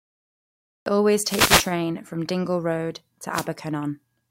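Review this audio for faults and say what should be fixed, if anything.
The clip opens with a cut-off start: from 0.00 to 0.86 s there is digital silence, and at 0.86 s the speech comes in abruptly, mid-sound, with no natural attack or rise. Recording or streaming began late, so the first part of the utterance was never captured. On a waveform this is a dead-flat line that jumps straight into the speech waveform, and on a spectrogram a blank region ending in a hard vertical edge. To prevent it, start recording with pre-roll before anyone speaks, or use a pre-record buffer.

There are two wireless microphone noise hits, from 1.20 to 1.75 s and from 3.32 to 3.47 s, heard as short swishes of static over the speech. The analogue FM radio link faded as reflected paths cancelled the signal, letting the receiver's own noise rise. A spectrogram shows broadband noise filling the whole frequency range during those spans, and the waveform shows a hissy, thickened envelope there. 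To prevent them, use diversity receivers, keep line of sight between microphone and receiver, and reposition the antennas.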